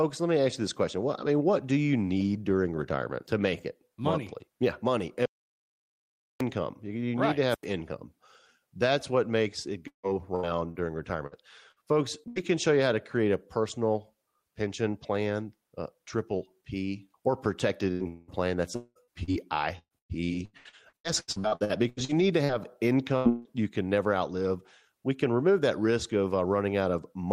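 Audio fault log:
5.26–6.40 s audio dropout to silence: about 1.15 s of silence, likely a lost input; the waveform is a flat line and the spectrogram a blank column.
7.47–7.65 s wireless microphone squelch dropout: hiss rises as the radio signal fades, then the receiver mutes for about 92 ms; a near-empty gap follows broadband noise.
9.87–12.39 s repeated packet loss (robotic sound): six gaps, longest 159 ms, patched by repeating the last sound, 18% of the span; choppy, with smeared spectrogram streaks.
17.92 s burst of packet loss: about 80 ms is missing and replaced by fading continuation of the last sound; the spectrogram shows a held, decaying band.
18.08–18.31 s long network dropout: about 200 ms never arrived, likely a network stall, and a fading continuation of the last sound covers it; the waveform envelope decays smoothly, without hard silence.
18.76–22.52 s repeated packet loss (robotic sound): 21 gaps, longest 197 ms, concealing 35% of the span; sound turns choppy, with repeated frozen spectral slices and missing pieces.
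23.17 s burst of packet loss: about 80 ms is lost and filled by a decaying copy of the preceding sound, visible as a short held smear.
23.29–23.48 s long network dropout: about 160 ms is missing, likely a network outage, and filled by a fading continuation of the last sound; the waveform tapers without reaching silence.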